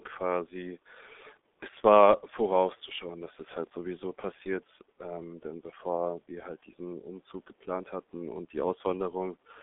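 Speech, heavily damaged throughout by the G.723.1 codec. Nothing passes above 3.7 kHz. It sounds muffled and hoarse, with smeared consonants, which fits about 6.3 kbit/s.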